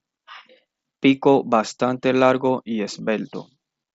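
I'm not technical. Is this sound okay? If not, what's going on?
Yes, no faults to hear.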